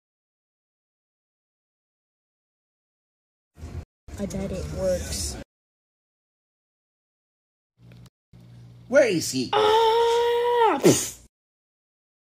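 Holes of silence cut into the sound from 3.83 to 4.08 s and again from 8.08 to 8.33 s, each 250 ms long and spaced about 4 s apart. This regular spacing marks a gap between chunks: the audio arrived in roughly 4-second pieces and silence was inserted at each join.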